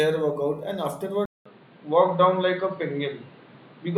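At 1.25 s the speech drops out for 200 ms, then continues dull with nothing above 4.8 kHz, new background noise about 30 dB down and a level shift of around 5 dB. A filter alone would not add noise, so the input likely switched to a poorer device.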